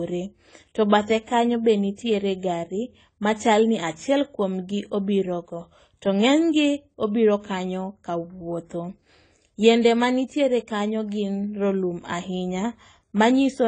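The speech was likely passed through AAC compression at a low bitrate, with damage that fits AAC-LC running at around 24 kbps. It is present throughout. Starved of bits, the encoder discards the top of the spectrum, so nothing above 9.6 kHz survives and the sound is dull and closed-in. The remaining bands are quantised too coarsely, leaving plainly audible smearing, with a warbling, fizzy texture on sibilants and sustained sounds.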